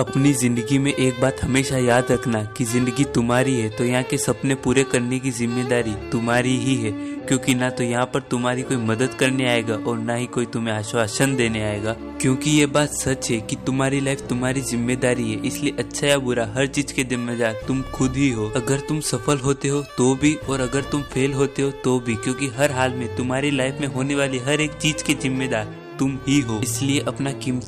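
No technical faults can be heard anywhere in the audio.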